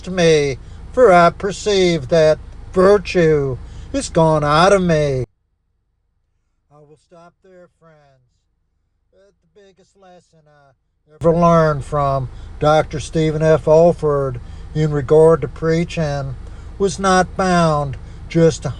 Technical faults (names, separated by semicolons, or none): one channel inverted